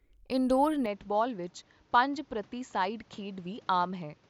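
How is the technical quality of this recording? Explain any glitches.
The recording has one clear fault. From 0.86 s to the end, the speech abruptly loses brightness. Nothing is heard above about 7.6 kHz, and the level drops by roughly 5 dB. A faint new background noise sits well below the speech. There is no gap at the change. This is likely an input switched to a poorer device, with a different microphone or headset path taking over. That narrower path trims the top end and brings its own tone and noise, so the sound turns duller and boxier.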